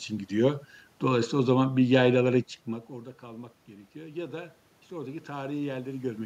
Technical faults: automatic gain rising

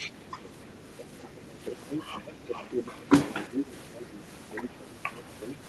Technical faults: other side's voice leaking through; speech suppressed in double talk

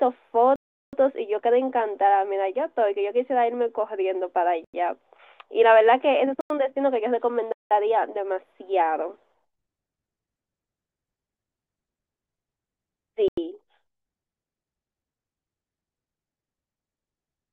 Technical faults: block of digital silence

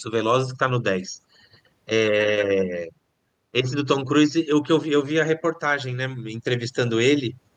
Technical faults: none

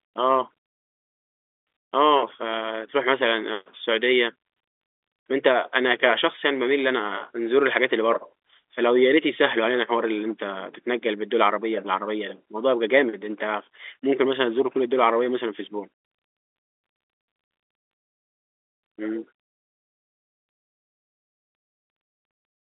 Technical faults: none

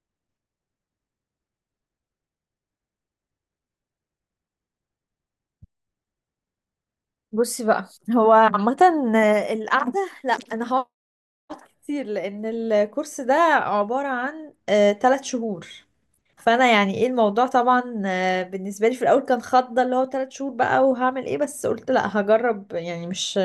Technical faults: none

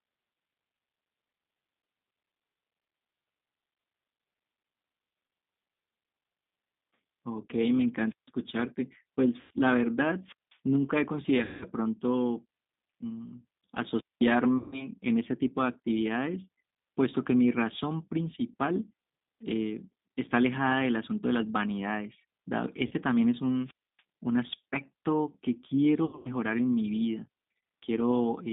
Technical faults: G.729 codec; wireless microphone squelch dropout; VoIP packet loss concealed by the speech codec

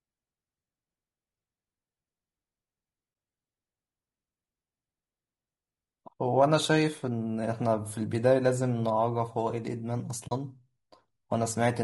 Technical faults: low-delay AAC compression; AAC frame loss with muting

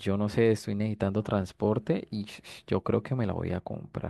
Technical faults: none

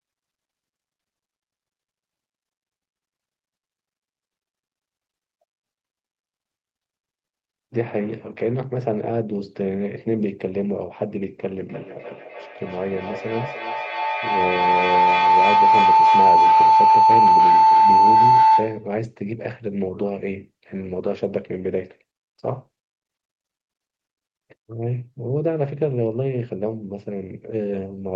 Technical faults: feedback howl

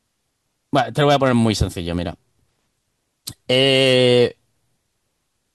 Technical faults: none

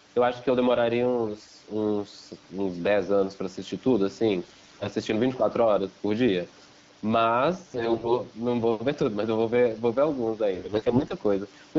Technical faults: gain pumping; AMR bit errors

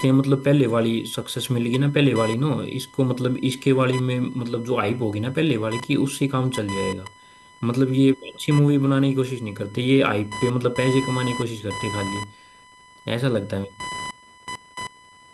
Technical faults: computer activity noise

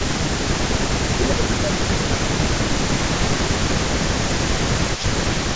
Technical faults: echo leak; speech suppressed in double talk

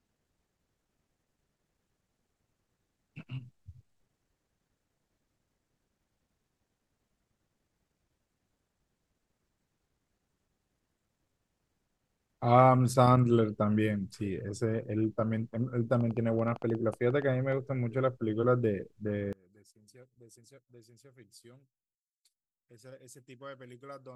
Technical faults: train of clicks; one channel inverted

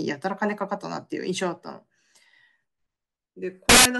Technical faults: samples built from the wrong bytes

